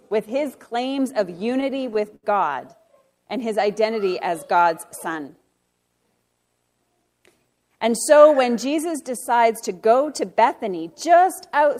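Between 1.39 and 2.25 s, packets reached the receiver late or slower than playback consumed them, so its jitter buffer kept running dry, producing repeated stalls (stutter). Each time, the receiver stretched the last sound to cover the wait, fading it during longer holds, until fresh audio arrived. About eight brief holds, the longest 71 ms and together roughly 135 ms, fill about a sixth of that stretch. Nothing is lost, but the sound hitches, drags and stutters.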